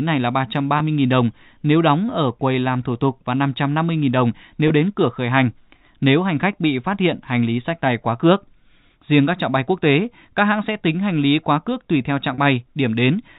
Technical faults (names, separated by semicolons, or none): packet loss with pitch repetition